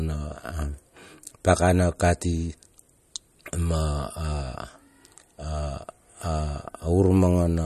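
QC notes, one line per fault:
Throughout, MP3 compression: the speech has nothing above 12.5 kHz and a plainly audible watery, swirling texture, likely from an MP3 encoder short of bits, which fits a rate near 48 kbps. Unlike a plain low-pass filter, faint detail flickers in and out between frames.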